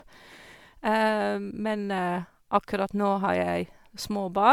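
Generation loss runs through the whole speech clip. It sounds swirly and hollow, with smeared consonant attacks and a watery texture, more degraded than a single MP3 encode at around 128 kbit/s would sound. The likely cause is repeated lossy re-encoding, perhaps around seven passes. Each decode and re-encode quantises the signal again on a shifted frame grid, so the noise and spectral holes pile up. The top end still reaches about 20 kHz.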